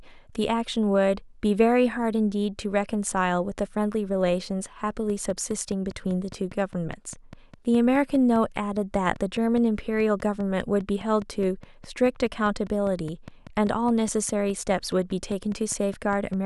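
A train of clicks runs through this speech from 5.1 s to 16.3 s, roughly fifty evenly spaced pulses at about 4.9 per second, each peaking near the level of the speech itself. The steady ticking, audible in pauses too, likely comes from electrical interference or a faulty connection or power supply.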